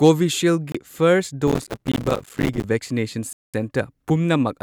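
At 0.72 s the audio drops out for a brief 26 ms, and again from 3.33 to 3.54 s for a longer 0.21 s gap. Both are likely Bluetooth stalls: the headphones' buffer ran dry while delayed packets were resent, so the sound cuts to silence and then resumes.

From 1.48 to 2.64 s there's processor overload crackle. The processor kept missing deadlines on small buffers, roughly 5 ms each, around a hundred times. Each miss left a tiny silent hole, and together they make a gritty, tearing crackle over the speech.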